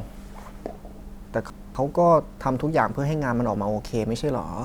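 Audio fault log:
1.25–1.75 s, chunks out of order: one 250 ms chunk plays a chunk late, after its successor. The sound briefly jumbles, with three hard joins.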